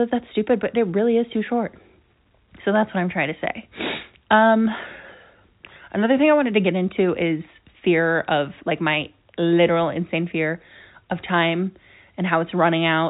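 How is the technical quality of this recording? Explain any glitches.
No glitches or faults heard.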